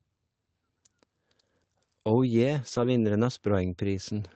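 From 2.67 to 2.85 s, five separate packets were lost and rebuilt from error correction: the decoder filled roughly 100 ms from low-bitrate copies carried in the following packets. There's no gap, but that stretch of speech turns rougher and noisier than the surrounding Opus call audio.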